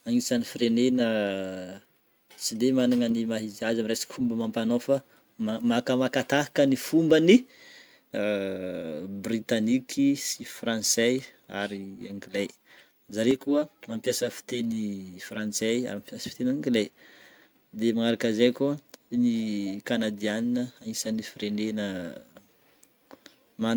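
From 13.31 to 15.61 s, the speech turns hollow and phasey. This is channel delay (comb filtering). One channel lags the other by about 10 ms, and summing them to mono cancels shared sound at evenly spaced frequencies, starting around 50 Hz.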